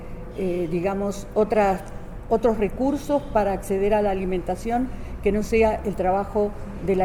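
At about 2.75 s the audio has a brief dropout typical of lost LE Audio frames: a 10 ms gap that fits a single missing LC3 frame on the Bluetooth LE Audio link. The decoder conceals the hole by replaying the previous frame's spectrum with its signs randomised, so instead of silence there is a short noisy smear where tonal content loses its clear pitch. Because the loss is so brief, normal sound resumes immediately afterwards.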